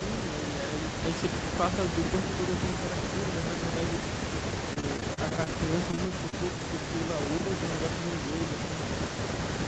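Speech on a call, with a faint repeat of the voice trailing it from 0.0 to 7.37 s and again from 7.59 s to the end. This is an echo leak: the copy arrives about 166 ms behind the original and sits about 10 dB below it. The likely cause is a far end listening on a loudspeaker whose echo canceller let part of the microphone pickup through and sent it back. Within that stretch, from 4.73 to 6.34 s, the sound turns choppy. This is repeated packet loss. Around a dozen short holes appear, the longest about 35 ms, and each is patched by stretching the preceding sound. Roughly 250 ms of the span is concealment covering about 160 ms of missing audio, some 15% of the stretch. At 7.40 to 7.52 s the voice briefly dips by roughly 15 dB for about a tenth of a second, a case of speech suppressed in double talk. The likely cause is the echo canceller failing to tell the local talker apart from loudspeaker echo while both sides were active, and attenuating everything in that instant. 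The short gap in the echo between 7.37 and 7.59 s sits right around this dip. Throughout, the audio tops out at 8 kHz, consistent with the Opus call path and the microphone processing.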